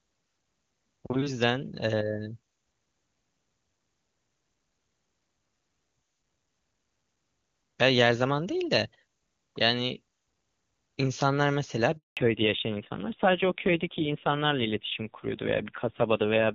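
At 11.97 s the speech cuts out for 200 ms, ending at 12.17 s. This is a handover gap: while the call moved between networks, no speech frames arrived. The voice falls away within a few tens of milliseconds and returns only once the new link is carrying audio.

From 12.17 s to the end there is a fallback to narrowband. Before this point the HD Voice codec carried content up to about 7 kHz. Afterwards nothing is heard above 4 kHz, and the voice sounds dull and raspy, which fits a low AMR-NB rate near 5.9 kbit/s.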